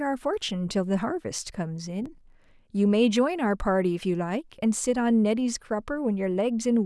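From 2.06 to 2.56 s the speech carries processor overload crackle. The gaps fit small buffers of around 3 ms that the processor couldn't finish on time. Roughly twenty were skipped, and the hard-edged dropouts merge into a gritty tearing that stops when the load passes.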